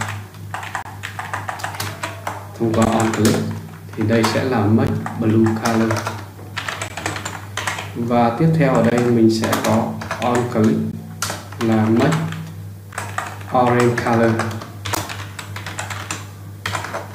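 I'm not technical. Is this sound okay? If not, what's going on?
No. The sound briefly drops out every 2 seconds: a gap at a join of encoded pieces. The first, about 28 ms long, runs from 0.82 to 0.85 s. Shorter 16 ms gaps follow at 2.85, 4.87, 6.88, 8.90, 10.92, 12.93 and 14.95 s. The audio was likely compressed in 2-second chunks and stitched together, with each chunk's built-in padding silence left in. You hear a tiny hiccup, then the sound resumes where it stopped.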